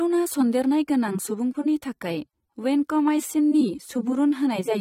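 From start to end the speech shows plainly audible AAC compression damage. Nothing sounds above 16.6 kHz, and what remains is dull and smeared, with a warbling, fizzy edge on sibilants. This fits a likely AAC-LC encode near 32 kbps, starving bands of bits.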